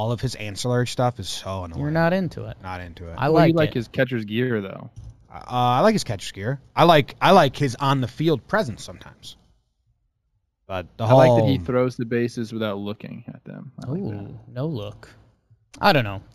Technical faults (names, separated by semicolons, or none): imaging from linear upsampling